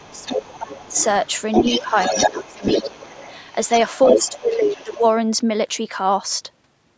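From 0.0 to 0.96 s the talker's level sinks by roughly 25 dB, the speech suppressed in double talk, while a faint second voice leaks in from 0.03 to 1.06 s at about 20 dB below. The likely cause is an echo canceller that, with both sides talking, could not tell its own talker from loudspeaker echo and turned everything down. On a waveform the envelope collapses; on a spectrogram the talker's harmonics thin out, especially the upper bands.

From 1.24 to 4.36 s the other side's voice leaks through much more strongly, only about 5 dB under the talker. This is likely loudspeaker playback that the canceller failed to subtract. It shows as a second harmonic stack interleaved with the talker's on the spectrogram, which stops at 8 kHz throughout as the call's microphone chain band-limits the audio.

Within that stretch the talker is clipped down again from 1.79 to 2.63 s and from 2.83 to 3.21 s, each dip reaching roughly 20 dB. 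The likely cause is the same double-talk suppression. These appear as notched gaps in the waveform envelope.

From 4.14 to 5.03 s a shallower dip of roughly 15 dB overlaps a last leak from 4.52 to 5.11 s at about 15 dB below, likely more residual echo. It is audible as a faint competing voice under the dimmed talker.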